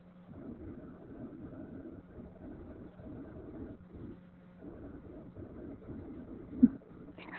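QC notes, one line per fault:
Throughout, Opus voice compression: the speech is confined to narrowband, with nothing above about 4 kHz, so it sounds muffled, hoarse and faintly robotic. The damage is heavy, which fits SILK mode at around 8 kbps. At that rate the linear-prediction excitation is coded coarsely in 20 ms frames. On a spectrogram the energy stops at a hard 4 kHz ceiling, and the harmonics look smeared and grainy rather than cleanly striated.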